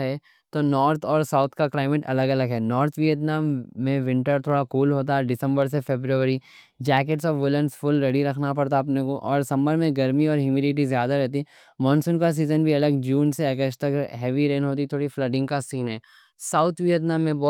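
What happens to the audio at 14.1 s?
At 14.1 s the speech carries clock slip clicks, which run continuously from 0.11 s to 17.48 s. A single sample is dropped or repeated roughly every 20 ms, about fifty times a second, so the ticks blur into a soft rattle that is most audible on louder, sustained sounds. The cause is likely two devices on unsynchronised clocks that differ by around a thousand parts per million.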